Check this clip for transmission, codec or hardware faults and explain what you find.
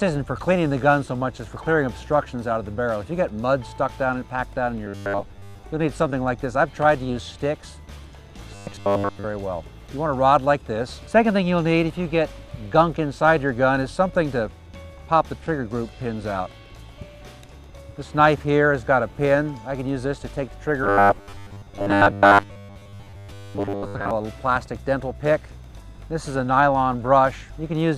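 Three bursts of robotic sound from repeated short buffers occur, at 4.86–5.63 s, 8.55–9.25 s and 20.84–24.11 s. The likely cause is audio arriving too seldom, so a roughly 10 ms chunk loops in place of most of the real sound, imposing a rigid, metallic 100 Hz buzz.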